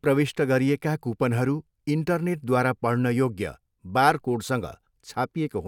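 No technical faults can be heard anywhere in this speech recording. Nothing in it breaks, stalls or changes character at any point.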